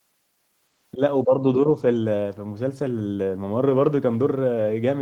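At 0.93 to 1.00 s and again at 1.24 to 1.34 s, the speech level dips by roughly 10 dB, each time for no more than a tenth of a second, leaving the voice briefly pulled back. This is most likely speech suppressed in double talk: with both ends active at once, the echo canceller failed to tell the near talker from loudspeaker echo and attenuated everything.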